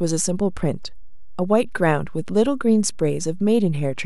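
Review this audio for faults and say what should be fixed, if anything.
The speech carries a DC offset throughout: the whole waveform sits shifted off zero by a constant of about -29 dBFS. It isn't audible as such, but it eats headroom. On a waveform the trace rides above or below the centre line, and a spectrogram shows a steady band at 0 Hz. A high-pass filter set around 20 Hz, or DC removal at capture, prevents it.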